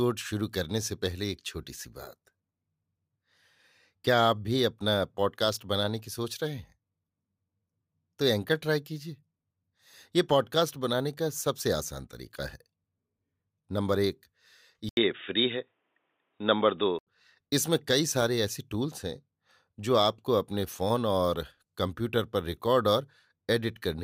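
Speech that turns dull and boxy from 14.89 to 17.07 s, with an 80 ms gap at the switch, nothing above 3.8 kHz, a level shift of about 5 dB and faint new background noise; the likely cause is the input switched to a poorer device.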